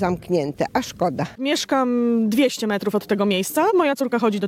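Software likely compressed the final stretch in time, a time-stretched section running from 2.26 s to the end at 4.48 s at 1.35 times speed: the pace jumps abruptly, rushed, while pitch stays unchanged.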